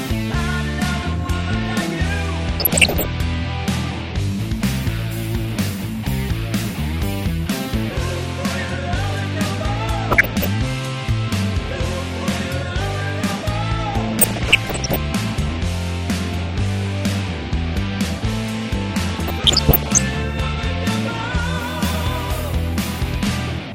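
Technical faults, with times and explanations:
2.60–3.05 s, 10.11–10.46 s, 14.21–14.96 s, 19.02–20.02 s: DAB burbling. Short blips of noise appear in single sub-bands. Bit errors of around one percent or less slip past error correction. Corrupted scale factors make single sub-bands jump in level for up to a frame.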